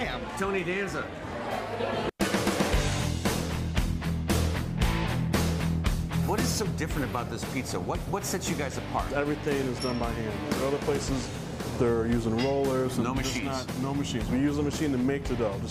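No technical faults can be heard anywhere in this audio. The signal chain gives no sign of trouble at any point.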